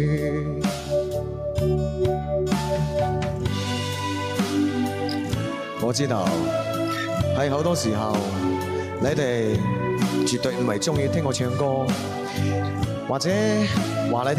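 No technical faults can be heard in the audio.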